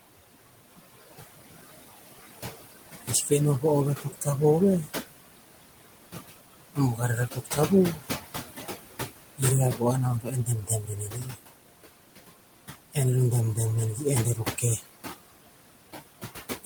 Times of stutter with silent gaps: none

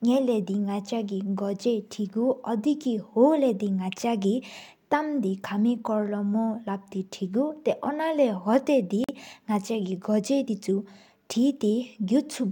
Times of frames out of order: none

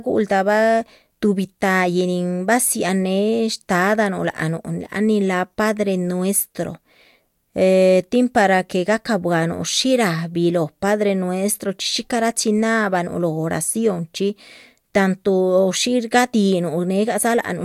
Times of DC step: none

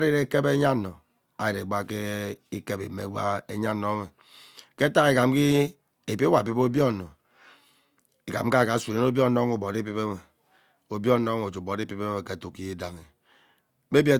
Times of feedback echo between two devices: none

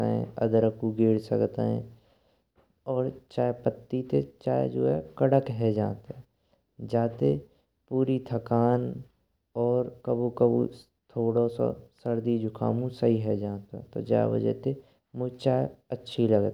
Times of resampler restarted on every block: 9.70-12.30

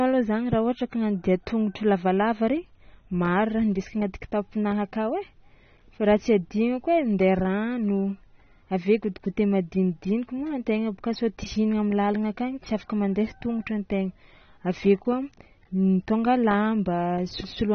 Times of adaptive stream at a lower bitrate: none

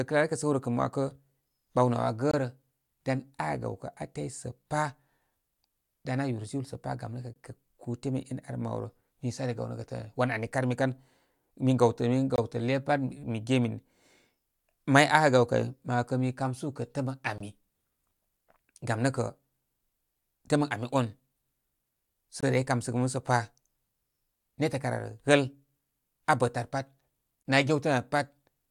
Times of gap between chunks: 2.31-2.34, 7.34-7.36, 12.36-12.38, 17.38-17.40, 22.40-22.43, 27.43-27.45

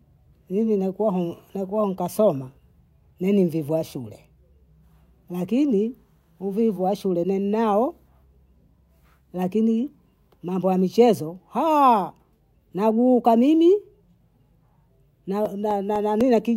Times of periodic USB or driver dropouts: 15.45-16.46

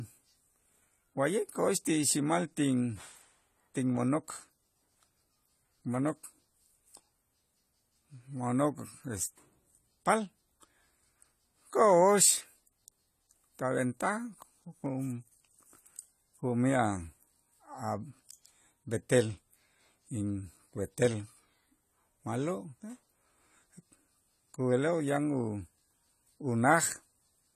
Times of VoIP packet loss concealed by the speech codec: none

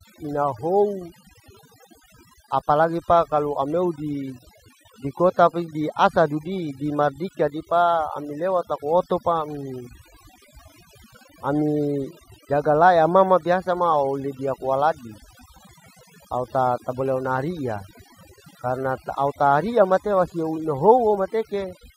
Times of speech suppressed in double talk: none

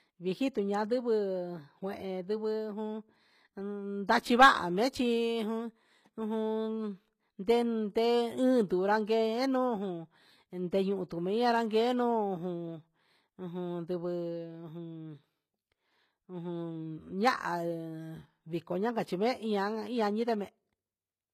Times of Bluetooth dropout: none

